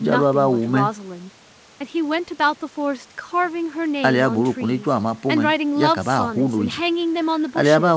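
No faults are audible in this speech; it carries the band limit of a wideband call path, with nothing above 8 kHz, which fits G.722.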